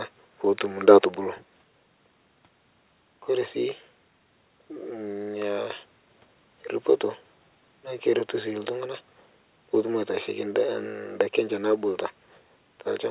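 No technical faults are audible.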